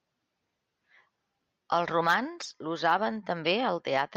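Twice the decoder was handed a compressed frame with flipped bits and played it instead of discarding it, a corrupt frame decoded. Misread codes and gains put energy at the wrong frequencies for the span of roughly one frame each time. From 2.43 to 2.45 s this comes out as a short glitch peaking around -25 dBFS, and at 3.45 s as a briefer, quieter glitch near -30 dBFS, cutting across the speech.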